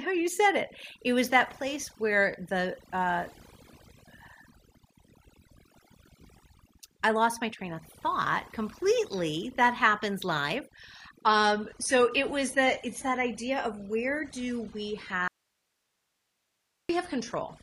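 Overdone noise removal runs through the whole speech clip. A noise reducer set far too hard pulls individual frequency bands down whenever they sit near its noise estimate, so the background collapses into near silence flecked with twinkling specks, and quieter parts of the voice are stripped away.

An adaptive stream at a lower bitrate takes over at 11.22 s and stays to the end. The quality changes suddenly, without a gap: nothing remains above 11.5 kHz and codec artefacts thicken, which fits a switch from roughly 96 kbit/s AAC to about 32 kbit/s.

An audio dropout to a faint residue runs from 15.28 to 16.89 s, a loss of 1.61 s. The speech cuts off abruptly mid-flow and comes back just as sharply, leaving only hiss roughly 50 dB below the speech. This is likely a break in the signal while the downstream path stayed live.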